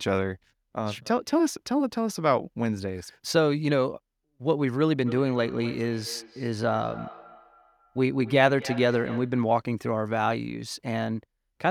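From 5.06 to 9.45 s the speech returns as feedback echo between two devices, repeating roughly every third of a second and peaking about 16 dB below the voice. Unlike diffuse room reverberation, these are distinct, evenly spaced copies from another device's loudspeaker.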